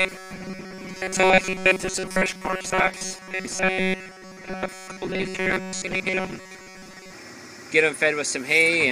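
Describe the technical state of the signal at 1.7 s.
At 1.7 s the audio has robotic sound from repeated short buffers (0.01–7.14 s). The cause is likely starved playback looping about 5 ms chunks, giving a rigid 188 Hz metallic buzz over most of the sound.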